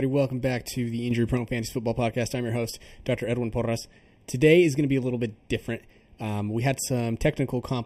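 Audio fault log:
Throughout: channel delay (comb filtering), one channel late by under half a millisecond, so mono summing cuts evenly spaced notches from about 1.5 kHz, giving hollow speech, seen on a spectrogram as fixed dark horizontal bands.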